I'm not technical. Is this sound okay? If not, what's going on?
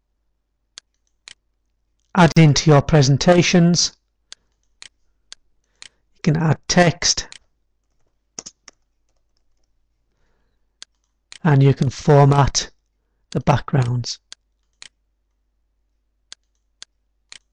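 No, not quite. At about 2.32 seconds there's a gap at a join of encoded pieces: two separately compressed chunks meet, leaving a 45-millisecond dropout before the sound picks up where it left off.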